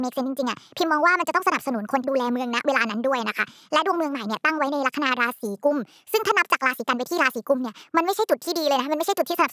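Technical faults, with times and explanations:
Throughout, wrong sample rate: the speech runs about 1.45 times too fast and sits roughly 6.45 semitones too high, so it sounds hurried and thin, with chipmunk-like vowels. Speed and pitch are shifted by the same ratio, which means the samples are being played faster than they were captured, with no rate conversion. The ratio fits audio recorded at 22 kHz being played back at 32 kHz.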